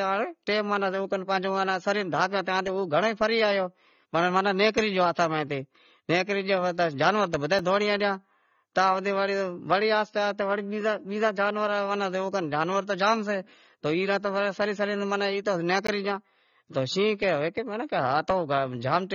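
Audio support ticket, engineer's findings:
Speech runs dull and smeared the whole way through, with a warbly, fizzy edge on sibilants and held sounds. Likely AAC compression, most probably AAC-LC at about 24 kbps: top end cut off low, spectral holes, noise-filled bands. Damage is plainly audible.

Two blocks of digital silence, hard cuts with no fade. At 7.59 s, right after "جانور تو بدہا ئی", a 5 ms hole heard as a tick. At 15.87 s, a 15 ms gap just before "گیا تو". Likely output buffer not getting filled in time, so zeros go out.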